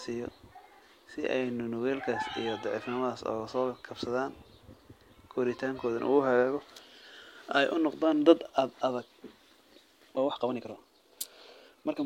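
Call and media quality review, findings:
Speech turns rushed from 10.14 s to the end, pitch unchanged: time-stretched section, about 1.55x faster, likely software dropping short pieces to fit length.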